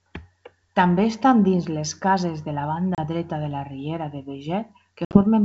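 Packet loss on an ADPCM call at 2.95–3.00 s and 5.05–5.19 s cuts hard silent gaps; the decoder's predictor then resyncs, briefly distorting the speech.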